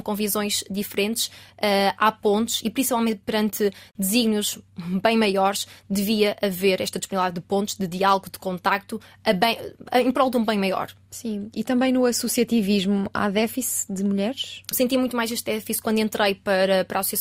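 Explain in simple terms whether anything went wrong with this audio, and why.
Nothing went wrong here: listening through the whole recording turns up no audible technical faults.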